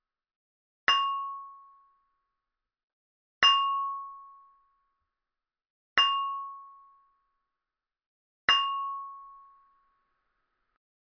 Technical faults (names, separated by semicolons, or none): none